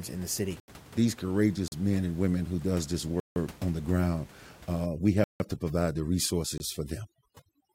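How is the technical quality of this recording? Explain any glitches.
The recording has two problems: repeated dropouts to digital silence, and heavy-handed noise reduction over the final few seconds. The room noise sits about 23 dB below the speech.

Blocks of digital silence occur at 0.60–0.68 s (80 ms), 1.68–1.72 s (40 ms), 3.20–3.36 s (160 ms), 5.24–5.40 s (160 ms) and 6.58–6.60 s (about 22 ms). Each block replaces samples with zeros, probably because the output buffer went unfilled in time. The edges are abrupt, and the longer gaps are heard as holes.

Overdone noise removal runs from 4.86 s to the end. The suppressor is cutting individual frequency bands hard wherever they approach its noise estimate, and it takes low-level parts of the voice with them. The background drops and breaks up into twinkling artefacts.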